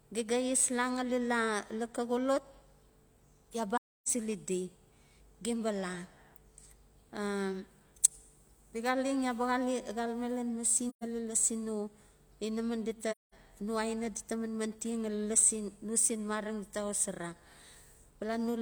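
AAC frame loss with muting strikes three times: 3.77 to 4.08 s, 10.89 to 11.04 s, and 13.11 to 13.34 s. The decoder zeroed runs of missing frames, consistent with about seven, three and five frames, so the speech fades into brief, soft-edged silences.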